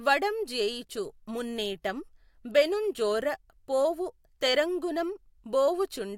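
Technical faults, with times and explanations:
No technical faults found anywhere in the speech recording.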